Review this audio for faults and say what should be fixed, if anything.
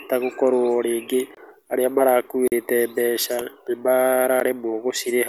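Four blocks of digital silence cut into the speech: 1.35 to 1.37 s (23 ms, which fits a 1024-sample buffer), 2.48 to 2.52 s (43 ms, just after "rĩngĩ arĩa"), 3.41 s (4 ms) and 4.40 s (12 ms, fitting a 512-sample buffer). The signal drops straight to zero and back without a fade; the short ones sound like ticks and the longer two like brief holes. To prevent this, make sure the audio thread always fills its output buffer in time, using a larger buffer or higher thread priority.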